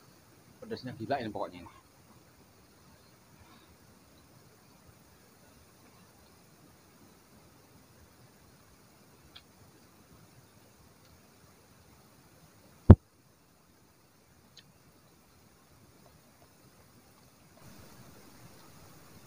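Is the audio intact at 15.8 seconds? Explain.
Yes, at 15.8 seconds the audio plays through cleanly with no dropout, click, distortion or other fault.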